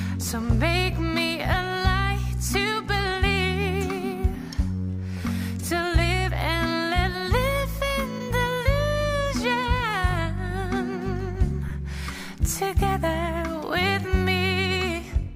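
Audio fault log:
0.91 s and 11.69 s, lost LE Audio frames: short gaps of 7.5 ms and 15 ms that the LC3 decoder filled with the previous spectrum under random signs, leaving a quick noisy smear.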